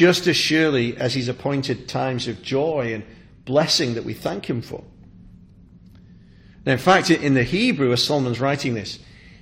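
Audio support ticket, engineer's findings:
No faults found on listening.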